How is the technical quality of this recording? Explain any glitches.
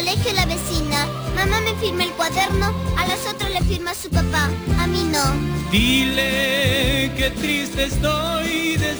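The recording carries one flaw throughout. Crude rate conversion runs the whole length: samples were simply repeated to raise the rate, which fits a step from 32 kHz to 44.1 kHz, leaving an error roughly 20 dB below the signal. It sounds like a gritty, inharmonic fizz riding on loud and high material. Unlike codec artefacts, it doesn't swirl or warble. Unlike clipping, it persists at modest levels.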